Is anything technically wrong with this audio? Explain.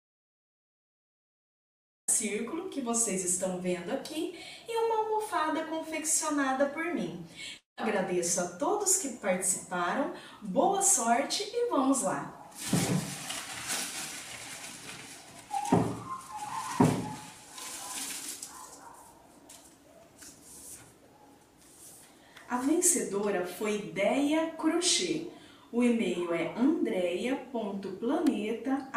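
Yes, there are two faults.

From the start until 2.08 s there is an audio dropout to silence that is already under way when the clip begins. The input was likely lost while zeros kept being written. It is dead silence with no room tone, a flat line on the waveform and a blank spectrogram until the sound begins abruptly.

From 7.57 to 7.79 s a long network dropout loses about 0.2 s of audio. The receiver stretches the last sound into a fading buzz, likely as packet-loss concealment, then leaves pure silence before the audio returns with that part missing. The spectrogram shows smeared, decaying bands followed by an empty gap.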